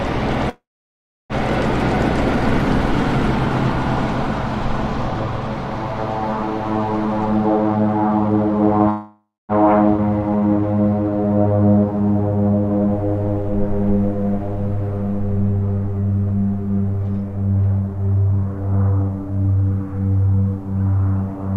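From 0.49 to 1.33 s the sound halts in a call audio freeze: a brief fading continuation of the last sound, then about 0.68 s of silence, 0.8 s in all. This is likely packets held in transit draining the jitter buffer. Playback then resumes where it stopped, with nothing lost but the timing pushed back.

From 7.31 to 8.80 s a jitter buffer speed-up runs the audio at 146% with pitch unchanged. Short pitch-period pieces totalling around 0.7 s are cut to shrink an overfull buffer, and the sound is audibly rushed.

A second call audio freeze follows from 8.90 to 9.52 s: a 0.59 s fill, the last 0.21 s silent, then resumption.

At 9.97 to 10.01 s a skip ahead drops roughly 0.2 s of audio and splices the two sides almost directly, leaving an abrupt forward jump.

Immediately after, from 10.05 to 11.58 s, a jitter buffer slow-down plays at 85%, repeating pitch periods to add 232 ms of reserve. Sounds are drawn out at the same pitch.

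From 17.21 to 20.00 s a milder jitter buffer speed-up runs at 114%, removing roughly 0.4 s, and the sound is hurried.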